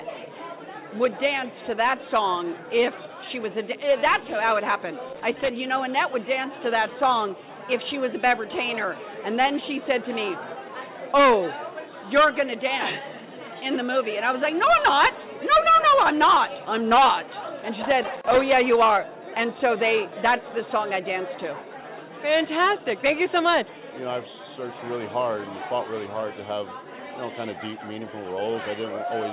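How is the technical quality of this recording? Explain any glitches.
Two short bursts of loose connector crackle are the main glitches, both riding on a telephone-style band that stops at 4 kHz, which points to a narrowband call codec like G.711. The first burst runs from about 5.09 to 5.49 s, the second from 17.82 to 18.41 s. Each time, a worn or dirty contact was shifting, so the connection kept making and breaking, chopping the signal into fragments. You hear it as an irregular, scratchy crackle lasting under half a second, then a bit longer the second time.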